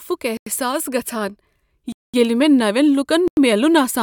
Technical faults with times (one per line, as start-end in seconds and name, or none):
0.37-0.46 block of digital silence
1.92-2.14 block of digital silence
3.28-3.37 block of digital silence